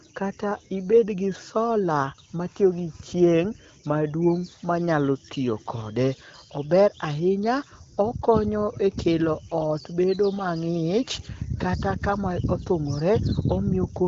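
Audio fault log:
The speech passes through the AMR wideband (HD Voice) codec at what sounds like one of its higher rates, leaving only a light coding texture and a band that stops at about 7.6 kHz, with no faults to log.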